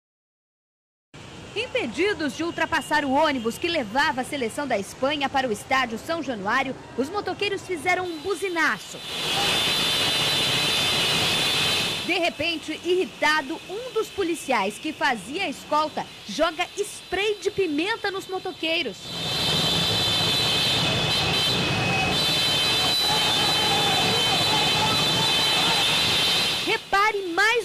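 No technical faults are audible.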